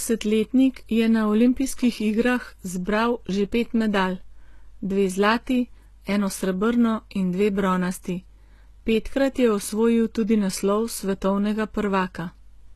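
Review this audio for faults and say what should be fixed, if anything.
Throughout, the speech sounds plainly gritty and lispy up top, with nothing above 12.3 kHz. That's likely HE-AAC compression faking the treble from copied lower bands, which fits roughly 16 kbps. To avoid it, export from the source at a higher bitrate, or use plain AAC or a lossless format.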